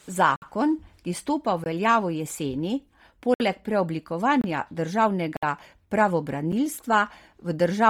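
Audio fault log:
Throughout: Bluetooth LC3 compression. The speech has a breathy, grainy edge, and the top of the band sounds hollow, as if filled with hiss rather than real detail. This is likely the work of the LC3 codec pushed hard. Working in 10 ms transform frames at a rate that fits a 32 kbps stream, it discards much of the upper spectrum and replaces it with synthetic noise. That substitution is heavy here.
0.36–0.42 s, 1.64–1.66 s, 3.34–3.40 s, 4.41–4.44 s, 5.37–5.43 s and 6.52 s: block of digital silence. The speech drops abruptly to dead silence and returns with no fade. The 60 ms holes at 0.36, 3.34 and 5.37 s are heard as distinct short gaps. The 20 ms and 26 ms ones are shorter holes, and the 8 ms one at 6.52 s is a tick. Each comes from a stretch of samples replaced by zeros, most plausibly an output buffer that was not filled in time.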